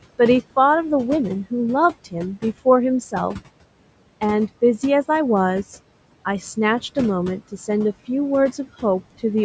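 Throughout the speech, the background noise dips between phrases and swells beneath them: noise suppressor artifacts, from frame-by-frame band gating cutting the room noise by about 18 dB.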